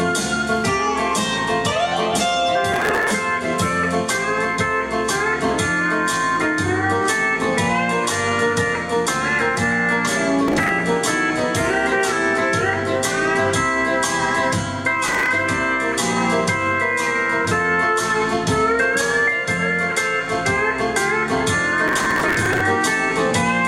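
Processor overload crackle appears at 2.73–3.12 s, 10.48–10.71 s, 15.06–15.29 s and 21.88–22.61 s, the last burst the longest. Buffers of roughly 1.5 ms are skipped in quick succession, leaving dense hard-edged gaps heard as gritty tearing, unlike a single isolated dropout or click.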